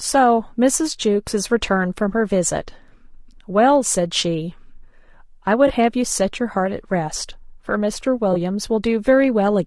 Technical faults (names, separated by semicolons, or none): low-delay AAC compression; AAC frame loss with concealment